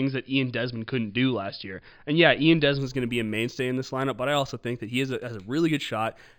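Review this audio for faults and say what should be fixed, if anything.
From 2.79 s to the end, the speech shows imaging from linear upsampling. It was raised from 11 kHz to 48 kHz by straight-line interpolation between samples. That weak filter dulls the top of the original band and leaves faint mirrored copies above it, giving sibilants a light metallic shimmer. On a spectrogram, energy thins toward 5.5 kHz, then a reversed ghost of the speech appears from 5.5 to 11 kHz, roughly 25 dB down. To prevent this, resample with a proper band-limited (windowed-sinc or polyphase) resampler instead of linear interpolation.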